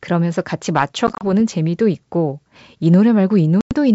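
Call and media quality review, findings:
Packet loss on an ADPCM call, 1.07–1.24 s and 3.61–3.73 s. First: about 80 ms of gaps scattered over 140 ms, longest 30 ms. Second: about 100 ms dropped. Several packets each. Waveform shows flat silent holes with hard edges; spectrogram shows full-band vertical blanks. Decoder predictor and step size desync with the sender, so audio resumes slightly distorted, settling within tens of milliseconds. Wideband G.722 path is clear to 7 kHz, consistent with 64 kbit/s.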